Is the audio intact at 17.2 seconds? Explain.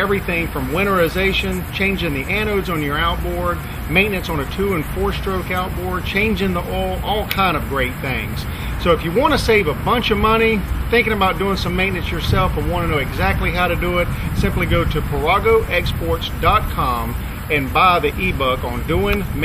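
Yes, the audio is intact at 17.2 seconds, with no dropout, click, distortion or other fault at that point.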